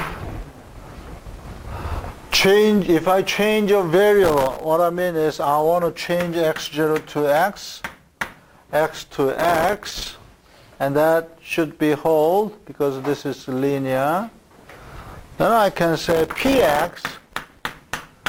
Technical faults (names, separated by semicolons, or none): processor overload crackle